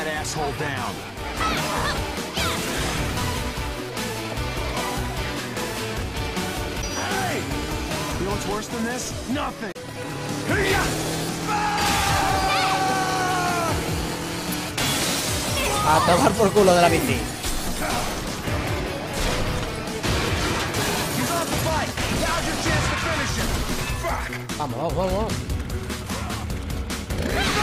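The audio has two short bursts of damaged data in a compressed stream. The first runs from 6.78 to 6.84 s. The second runs from 9.71 to 9.76 s. Each lasts about 56 ms and sounds like a chirp or blip cutting through the sound. At these points the compressed data was corrupted. The decoder could not read those frames correctly. It lost sync and had to hunt for the next valid frame before playback recovered.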